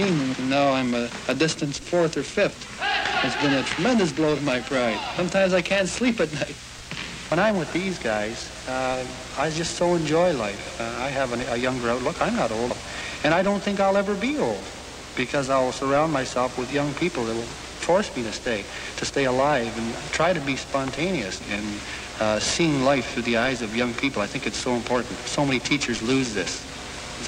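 At 7.32 and again at 12.70 s there's a quick blip from damaged data in the compressed stream, where the decoder misreads corrupted frames and briefly loses sync.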